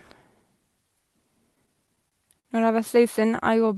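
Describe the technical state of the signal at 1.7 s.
Repeated stalls (stutter) from 1.55 to 2.47 s: the jitter buffer ran dry six times, each gap up to 52 ms bridged by stretching the preceding sound, so speech drags and stutters.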